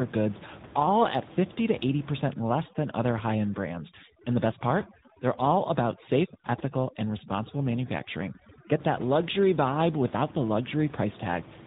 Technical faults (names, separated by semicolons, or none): tandem speech coding; overdone noise removal